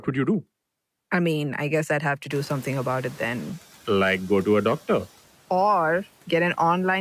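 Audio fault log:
2.3–3.5 s, noise suppressor catching up: Just after "guess I'd have to", the room noise jumps by about 24 dB, at around 2.5 s. The suppressor's noise estimate still reflects the quieter background, so the new noise passes through with little reduction. Over about 1.2 s the estimate climbs to the new level and the noise sinks, with about 5 dB of cut. The room noise then settles about 25 dB below the speech.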